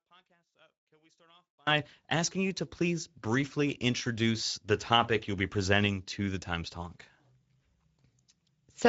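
From 0.0 to 1.67 s, the speech almost disappears when heard in mono. It drops by about 37 dB and leaves a faint trace. The likely cause is one channel inverted. Its reversed polarity cancels everything common to both channels.

Throughout the clip, the Speex codec damage is plainly audible. The speech sounds hoarse and grainy, with a noisy edge. Nothing is present above 7.7 kHz. The bandwidth points to a wideband mode around 16.8 kbps.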